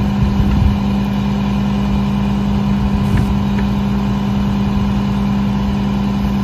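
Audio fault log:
2.14–6.43 s, Wi-Fi interference: from about 2.14 s to the end, a steady tick comes in roughly ten times a second. That's the beacon from a nearby Wi-Fi radio, sent every 102.4 ms, getting picked up and rectified somewhere in the audio circuit so the radio bursts turn into audible clicks. It sits well under the sound, around 35 dB down, so it's faint.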